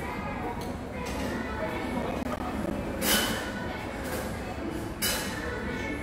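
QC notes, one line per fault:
2.02–2.71 s, processor overload crackle: roughly ten buffers of about 10 ms miss their deadlines, each leaving a hard-edged silent gap, heard together as gritty tearing.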